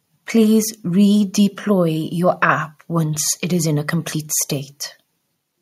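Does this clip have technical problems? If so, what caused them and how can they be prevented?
No, nothing stood out as a technical problem on listening to this speech clip, so there is no cause to trace or prevent.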